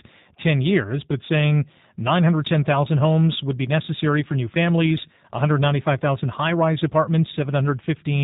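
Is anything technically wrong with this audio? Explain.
Yes. Throughout the speech the sound carries G.729 codec damage, and it is plainly audible. The codec rebuilds each 10 ms frame from a vocal tract filter, a pitch predictor and a few pulses, so the speech comes out slightly rough and synthetic, with nothing above 4 kHz. The buzzy, model-like texture is what separates it from a simple low-pass filter, which would only dull the sound. The damage fits an 8 kbit/s G.729A stream.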